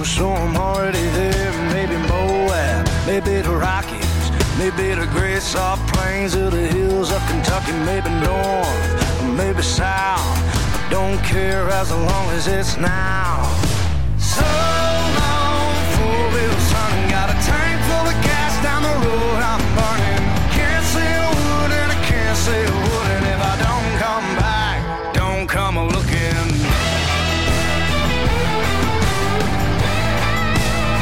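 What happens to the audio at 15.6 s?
At 15.6 s the audio sits inside a DC step lasting from 10.68 to 22.55 s: the waveform's zero line has jumped by about -20 dBFS. On a waveform the trace rides visibly off-centre; a spectrogram shows a thump-like vertical stripe at 10.68 s, with the sound itself continuing unchanged.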